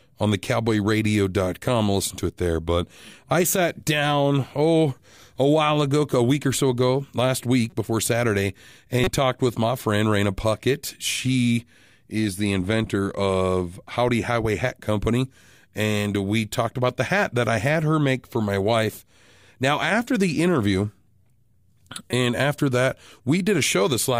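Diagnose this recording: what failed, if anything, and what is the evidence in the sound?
Codec stage: corrupt frames were decoded. Short glitches occur at 7.70–7.73 s after "or so ago last" (faint), 9.04–9.08 s before "talked with my friend" (near full scale) and 22.11–22.13 s before "and after that" (loud). Flipped bits corrupted gains and codes, misplacing energy for each damaged frame.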